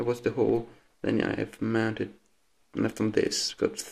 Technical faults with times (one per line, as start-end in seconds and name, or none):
none